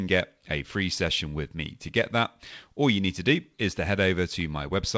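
No technical faults can be heard in this speech; it has passed through a wideband call codec, which leaves nothing above about 8 kHz.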